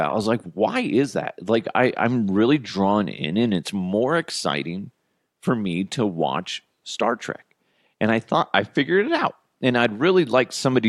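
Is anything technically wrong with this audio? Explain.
No, nothing technically wrong can be heard here.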